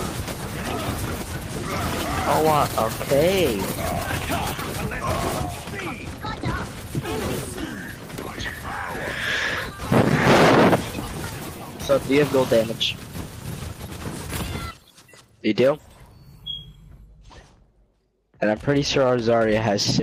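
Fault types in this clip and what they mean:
Nothing stood out on listening; no problems could be heard anywhere in the clip.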